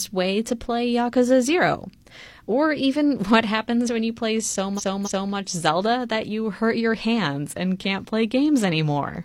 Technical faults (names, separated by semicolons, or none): repeated frames